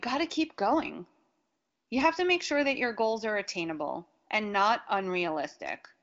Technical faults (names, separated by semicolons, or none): none